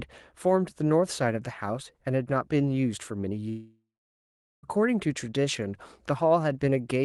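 Speech, where from 3.49 s to 4.66 s the sound smears into a fading buzz, then falls silent for 0.8 s before speech resumes with 1.14 s missing. A long network dropout is the likely cause: packets stopped arriving, the receiver extended the last audio until giving up, and playback restarted later without the lost stretch.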